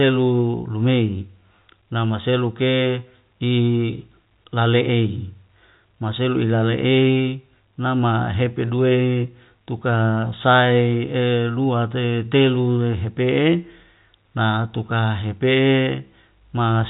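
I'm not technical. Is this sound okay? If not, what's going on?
Yes, nothing stood out as a problem when listening to this speech recording.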